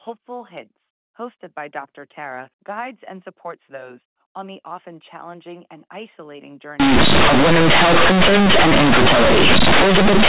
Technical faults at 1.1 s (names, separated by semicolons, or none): none